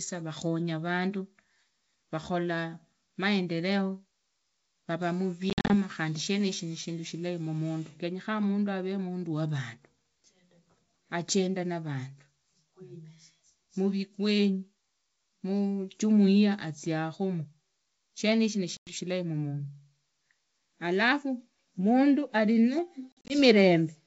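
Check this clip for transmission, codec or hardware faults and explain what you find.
The clip has one kind of fault, heard three times in speech carried over G.722 wideband coding, whose faint upper-band hiss fits the full 64 kbit/s mode.

Packet loss on an ADPCM call occurs at 5.50 to 5.74 s, 18.77 to 18.94 s and 23.12 to 23.34 s. Missing packets become silent gaps, and the receiving predictor and step size lose track of the sender's, so after each gap the speech returns with some distortion before settling.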